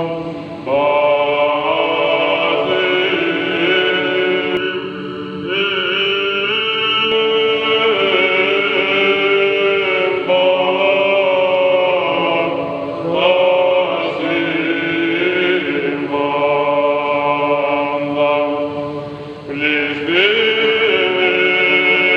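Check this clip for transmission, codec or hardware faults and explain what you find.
There's one fault: channel delay, giving comb filtering from 4.57 to 7.12 s. One side runs just under a millisecond late, so the mono sum cancels at evenly spaced frequencies starting around 700 Hz. That leaves the sound hollow and phasey.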